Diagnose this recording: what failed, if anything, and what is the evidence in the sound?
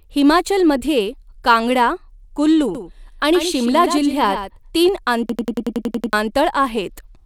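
Doubled audio track, 2.75 to 4.89 s, after "हिमाचलमध्ये कांगडा कुल्लू": a dry copy trails by roughly 150 ms, about 10 dB down, likely a second, slower capture path.

System hang loop, 5.29 to 6.13 s, at the driver or buffer stage: one 93 ms piece repeats nine times, a 10.8 Hz stutter fitting a 4096-sample ring buffer, replacing about 0.7 s.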